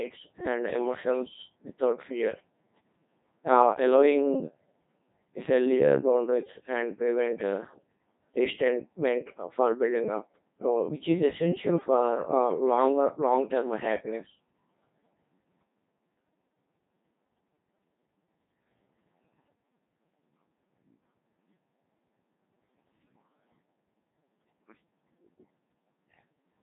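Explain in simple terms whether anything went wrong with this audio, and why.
Throughout the whole clip, the speech has passed through a Codec 2 vocoder, a very low-rate digital-radio codec. Instead of keeping the actual sound wave, it sends only a rough description of the voice: its pitch, loudness and overall tone colour. The receiver rebuilds the voice from simple tones, which is why it sounds robotic and buzzy here. Nothing above about 3.8 kHz survives, so the speech also sounds dull and narrow.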